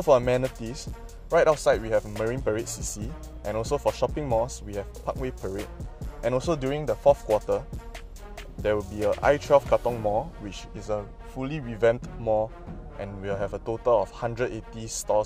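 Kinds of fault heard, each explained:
Dropped samples: two isolated, sharp clicks, one at 3.93 s and one at 4.74 s, each a single instant with no gap or loss of sound around it. Each shows as a thin vertical line across the spectrum. The likely cause is a tiny run of samples, a fraction of a millisecond's worth, going missing from the stream, so the waveform leaps straight from one value to a later one and that sudden step is heard as the click.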